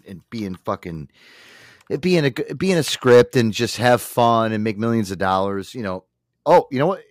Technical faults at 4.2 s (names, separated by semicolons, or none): hard clipping